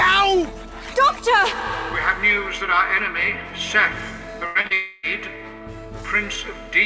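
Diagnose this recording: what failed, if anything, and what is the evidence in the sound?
Burst of packet loss at 4.46 to 4.58 s, a network-stage fault. About 90 ms of audio never arrived in time, and the receiver covered the hole by continuing the last sound and fading it, so a held buzz or decaying hiss fills about 91 ms of that span. When real audio resumes, the 90 ms in between is simply gone. The band stops at 8 kHz, consistent with a G.722 call path at 64 kbps.

Short concealed packet loss at 4.61 to 4.67 s and again at 4.67 to 4.73 s, also on the network side. Each time roughly 30 ms went missing, and the decoder extrapolated from the preceding sound, pitched if voiced and shaped noise if not, before crossfading into the arriving packets. The two back-to-back repairs give a brief smear or wobble just after the burst, and any short transient there can disappear.

Long network dropout from 4.73 to 5.06 s, following straight on from the short losses. 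About 300 ms of audio was lost, likely because the connection stalled for a moment. Concealment ran for roughly 0.3 s, stretching the last sound into a fading buzz or hiss with no full silence underneath. The audio then picks up again later in time, with that third of a second missing.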